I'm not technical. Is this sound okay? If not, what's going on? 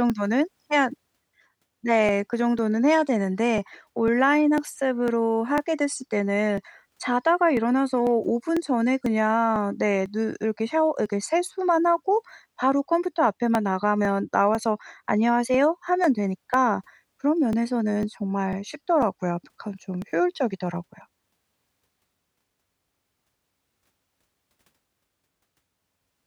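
No. There's a steady ticking running through the speech from about 0.1 s to 26.0 s, roughly every half second (0.498 s apart), around fifty ticks in all. These are periodic USB or driver dropouts: something on the computer briefly stalls the audio connection on a fixed schedule, and each time a couple of milliseconds of sound simply get skipped. That tiny jump makes a click, heard only while someone's talking.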